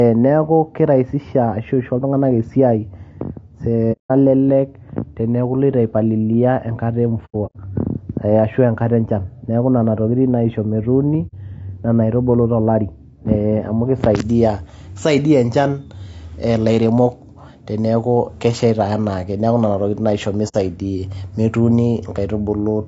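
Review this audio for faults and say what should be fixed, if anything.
The speech sounds rough and grainy the whole way through, with noise filling the gaps between harmonics and a synthetic top end. That's likely low-delay AAC compression (AAC-ELD) pushed too hard. It fits a bitrate around 32 kbps, where too few bits are left to code the harmonics cleanly. Giving the encoder a higher bitrate, say 64 kbps or more, would clear this up.

There's also AAC frame loss with muting at 3.92–4.11 s, 7.25–7.56 s after "palilia te nkata e", 11.27–11.34 s after "nena tokitin naisho metuuni", and 20.48–20.55 s after "nena tokiting naisho". The 7.25 s one is a scatter of gaps, the longest roughly a tenth of a second. The decoder zeroed the missing frames, and the overlapping windows fade each hole in and out. Turning on forward error correction or proper concealment would prevent these dropouts.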